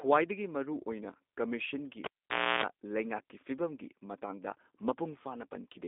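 The recording is speech, and two faults run through its whole length. The first is a block size mismatch with zero padding. A steady buzz sits under the speech at about 43.1 Hz. Each block ends in a short stretch of silence, and those gaps repeat at the block rate. The rate fits one stage writing slightly short blocks into a 1024-sample read. The playback slows by a factor of only 0.999, so the timing and pitch sound essentially normal. The second fault is G.729 codec damage, and it is plainly audible. The speech stays intelligible but sounds rough and slightly synthetic. Nothing passes above 3.7 kHz, and the band is narrow, roughly 250 Hz to 3.7 kHz. That thin, phone-line character points to an 8 kbit/s speech codec of this kind. It models the voice from a vocal tract filter and pitch predictor, with only a few pulses per frame.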